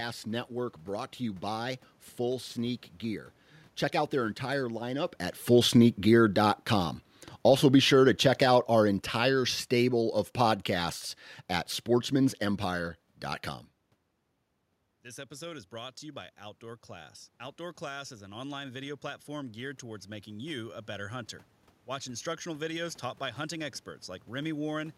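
From 5.38 s to 11.02 s the automatic gain falling: after the level jumps when the talker moves in around 5 s, the control judges the input too loud and eases its gain down by about 8 dB. Unlike a talker backing away, the room noise sinks along with the voice.

From 15.02 s to 21.26 s comes automatic gain rising. The voice had dropped by about 15 dB when the talker moved off near 13.5 s, and the control slowly lifts gain by about 7 dB. Voice and background swell together, which a talker's own movement wouldn't cause.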